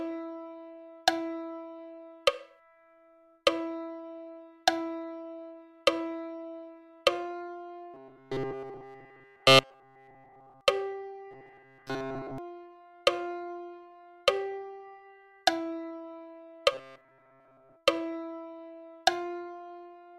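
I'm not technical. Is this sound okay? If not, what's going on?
No. There is robotic sound from repeated short buffers from 7.94 to 10.61 s, 11.31 to 12.38 s and 16.72 to 17.77 s. The sound turns into a stiff, metallic buzz pitched at 133 Hz. The likely cause is fresh audio arriving too late, so the player keeps replaying a tiny 7.5 ms scrap to fill the gap. In the first stretch nearly all of the sound is replaced this way. In the later two, most of it is.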